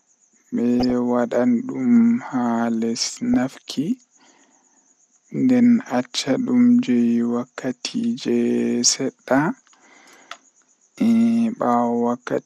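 Throughout, the speech sounds dull and gurgling, with upper bands flickering out. This is likely MP2 compression starved of bits, consistent with around 80 kbps. It is steady, unlike burst errors.

DAB burbling breaks in at 0.80 to 0.92 s, 3.02 to 3.34 s, 5.86 to 6.05 s and 7.63 to 7.80 s, heaviest in the last. Bit errors corrupt sub-band samples and levels, causing brief noise blips and level jumps in single sub-bands rather than constant dullness.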